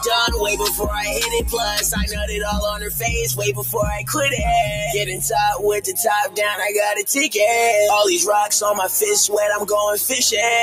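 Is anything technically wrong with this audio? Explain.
Yes. A noise suppressor meant for speech was left on across the whole clip, treating sustained tones, ambience and decay as noise to remove. The level keeps swinging by around 10 dB, so held sound pumps and thins while attacks pass through.

Sound cut by the noise suppressor occurs at 2.1–2.35 s, 2.73–3.05 s, 3.55–3.75 s, 3.95–4.11 s and 5.05–5.24 s. The suppressor judged these stretches to be noise and pulled them down by about 6 to 8 dB, so they dip.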